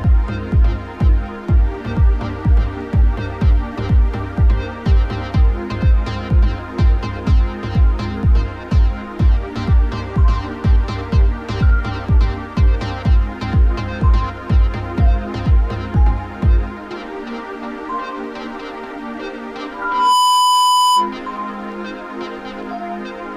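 Loudspeaker feedback squeal runs from 19.74 s to 21.17 s. A microphone is picking up the loudspeaker it drives, and at about 997 Hz the gain around that loop exceeds one, so each pass reinforces the tone. It swells over just under half a second into a steady, piercing single-pitch squeal sitting roughly 5 dB above the surrounding sound, and it holds until the loop is broken near 21.17 s.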